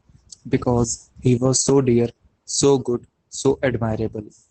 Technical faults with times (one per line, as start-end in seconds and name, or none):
0.00-4.51 Opus voice compression